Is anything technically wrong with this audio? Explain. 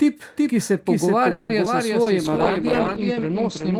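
Yes, the speech has four kinds of technical fault.

A doubled audio track runs through the whole clip: a second full-band copy of the speech trails the original by roughly 0.4 s at about 5 dB lower. It is most likely a second capture arriving over a slower path, or an edit that left two misaligned copies in the mix. That copy is dry, with no decay or room colour, so every phrase is followed by a flat, distinct echo rather than reverberation.

A call audio freeze occurs from 1.31 to 1.52 s, just after "ki se". Packets were most likely held up in transit and the jitter buffer ran dry. For about 180 ms the receiver stretched the last sound into a fading buzz or hiss. When the packets resumed, the speech picked up exactly where it had stopped. Nothing is lost, but the stall adds an extra pause of about 180 ms.

Short concealed packet loss occurs twice. From 1.65 to 1.69 s, about 40 ms of audio never reached the decoder in time. 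Only about 10 ms of it was patched with a continuation of the preceding sound, and the timing pulls back by about 30 ms, so the gap comes across as a brief smear. From 2.02 to 2.09 s, a 40 ms hole was filled with 40 ms of extrapolated sound before blending back, giving a brief smeared wobble.

A call bitrate drop begins at 2.25 s and lasts to the end. The encoder was pushed from 48 kbps down to 11 kbps, probably after the bandwidth estimate fell. Coding becomes much coarser, and the audio bandwidth narrows from 20 kHz to 8 kHz. The final stretch therefore sounds muffled and rough, having lost the crisp top end heard earlier.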